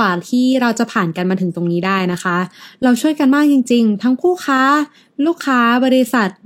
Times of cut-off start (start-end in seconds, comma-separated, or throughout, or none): none